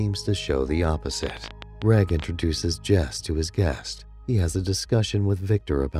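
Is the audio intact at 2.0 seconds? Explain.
No, a train of clicks runs from 1.23 to 2.25 s: about 13 irregular pops per second poking well above the sound, likely interference or a faulty connection.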